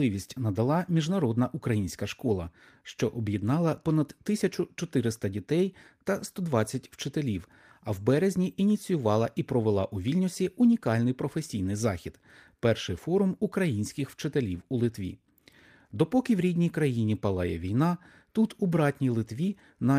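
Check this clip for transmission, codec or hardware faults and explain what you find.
Nothing in the speech recording points to a transmission, codec or hardware fault.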